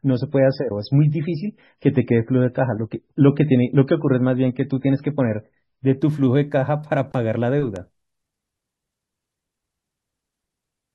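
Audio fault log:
0.0–6.0 s, adaptive stream starting at a low bitrate: muffled speech with nothing above 5.5 kHz and stronger codec artefacts, fitting a 16 kbit/s MP3 start, then a sudden jump to fuller 128 kbit/s-like quality with no gap.
7.76 s, electrical switching spike: a single sharp snap lying on top of the speech, likely an arc from a nearby switch or static discharge picked up by the audio line.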